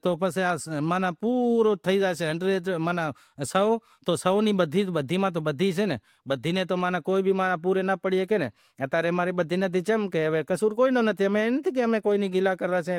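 No technical faults are audible anywhere in the speech.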